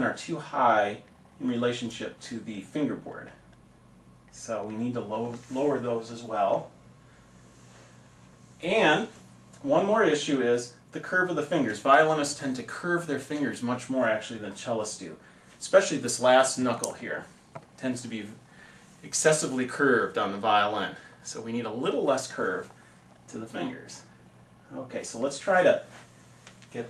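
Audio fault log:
No fault can be heard anywhere in this audio. There is nothing to log.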